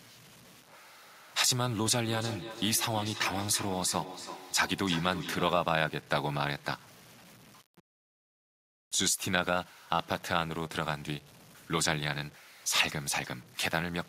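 From the first moment the speech carries a grainy, rasping distortion that shifts with every syllable, sitting around 25 dB below the voice and turning quiet endings gritty or sputtery. The likely cause is low bit depth without dither: samples truncated to roughly 8 bits, so the rounding error tracks the signal instead of becoming a steady hiss.

Between 2.04 and 5.8 s, each phrase returns roughly every third of a second, the repeats thinner and more ringing each time and peaking at about 12 dB below the speech. This is feedback echo between two devices: one device replays what the other's microphone sent, and that microphone picks it up again beyond the reach of its own echo canceller.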